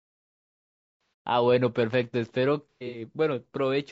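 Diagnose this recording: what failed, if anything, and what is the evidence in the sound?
Stage: codec. The whole clip is rough and grainy, with noise filling the gaps between harmonics and a thin, synthetic top band. The damage is plainly audible. This is likely low-delay AAC compression (AAC-ELD). Its short frames resolve pitch poorly, and the sound points to a low bitrate near 32 kbps.

Stage: recording or stream start. This is a cut-off start. The first 1.26 s is digital silence. At 1.26 s the speech begins abruptly, mid-sound, with no natural attack or fade-in. The capture or stream simply began late.

Stage: network or transport, then decoder. This is AAC frame loss with concealment. From 1.01 to 1.13 s, 120 ms of audio is missing and concealed, inside the silent lead-in. From 2.70 to 3.01 s, 180 ms is lost across 240 ms, with the longest gap around a tenth of a second. The decoder is rebuilding it from the last good spectrum.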